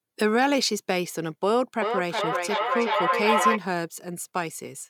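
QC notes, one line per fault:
1.82–3.63 s, feedback howl: a tone around 1 kHz swells up and peaks about 1 dB above the speech, pulsing roughly every 0.4 s. It sounds like two devices in the same room sharing the call, so the sound goes out the speaker, back into the mic, and comes round a bit louder each pass. Instead of dying away, the repeats narrow onto the frequency the loop likes best and ring until the loop's cut off.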